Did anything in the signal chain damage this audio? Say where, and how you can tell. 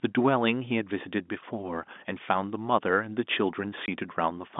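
Yes, on the network side: packet loss filled with silence at 3.86 to 3.88 s, a hard-edged 20 ms gap, which fits one dropped packet replaced by silence.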